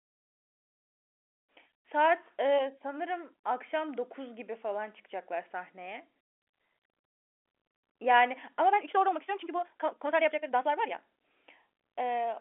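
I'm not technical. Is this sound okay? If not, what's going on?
No. From 8.66 to 10.98 s the speech turns rushed, 1.83 times faster, with unchanged pitch. This is a time-stretched section, likely squeezed by software to fit a shorter length.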